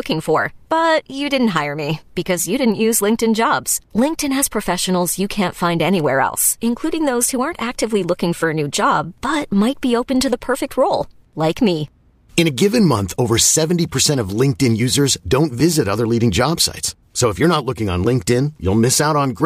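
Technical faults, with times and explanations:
No technical faults are audible.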